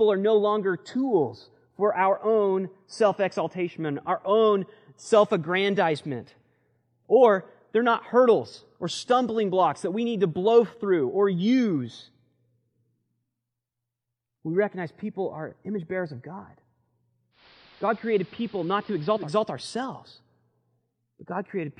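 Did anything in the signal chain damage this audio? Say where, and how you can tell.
Yes. From 17.31 to 19.33 s the receiver's digital radio blended to analogue AM over a 168 ms crossfade: faint hiss about 30 dB below the speech, level about 1 dB lower.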